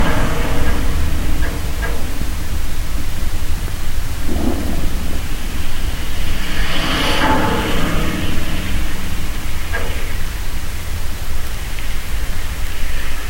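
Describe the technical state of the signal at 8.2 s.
The signal at 8.2 s is intact, with no audible fault at that moment.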